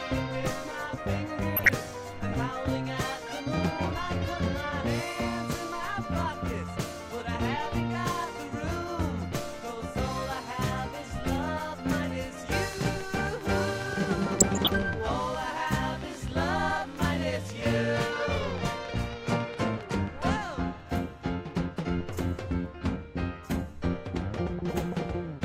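At 1.56 to 1.69 s, DAB burbling: bit errors slip past error correction into the MP2 data, corrupting sub-band levels, so the sound briefly burbles. From 12.73 to 20.23 s a train of clicks, likely interference injecting pulses, puts around fifty evenly spaced ticks at 7.35 per second, peaking about 5 dB above the sound. Within it, at 14.40 to 14.70 s, DAB burbling returns for longer, with errors at a fraction of a percent.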